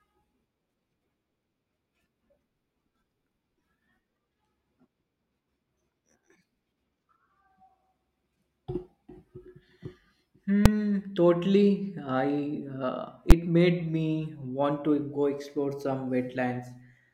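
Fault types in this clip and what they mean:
Invalid numbers at full scale: a calculation produced infinite or invalid values that were pinned to maximum level for a whole processing block, so the speech is replaced by two sharp bangs, at 10.66 s before "totally I" and 13.31 s before "made me want to".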